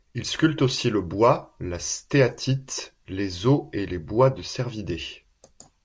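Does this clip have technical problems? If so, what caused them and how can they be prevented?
No, nothing in this speech recording stood out as a technical problem on listening, so there is nothing here to trace back or prevent.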